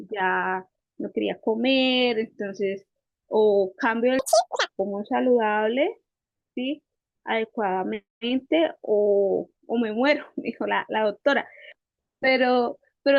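From 4.19 to 4.69 s, the audio is read two samples at a time. The speech runs at double speed, an octave higher.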